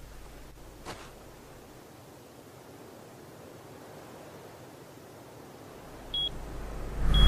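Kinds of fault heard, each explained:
Nothing stood out on listening.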